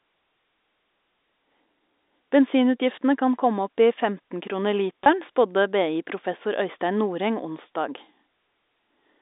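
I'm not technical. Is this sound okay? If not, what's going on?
No. At about 5.04 to 5.06 seconds the speech briefly sticks, a tiny held, slightly buzzy moment lasting about 20 milliseconds. This is packet loss with pitch repetition. The speech travels as small chunks of data, and two of them went missing. To cover the gap, the receiving end replayed the last little cycle of the voice's tone, which is why that instant sounds frozen and buzzy. The narrow, phone-line sound comes from standard G.711 telephone coding.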